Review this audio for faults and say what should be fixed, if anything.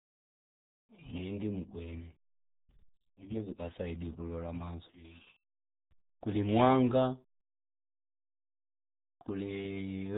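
The speech has passed through a RealAudio 14.4 codec for its whole length. This very low-rate dial-up speech coder, heavy enough that the result fits an 8 kbit/s RealAudio 1 stream, models each short frame with a few coarse parameters and throws the rest away. Nothing above 3.8 kHz survives, so consonants lose their edge and the voice turns muffled, with a gargly, bubbling texture where the crude frame-by-frame approximation fails to track it. To prevent this, keep an uncompressed or high-bitrate master and never route the recording through a legacy dial-up speech codec.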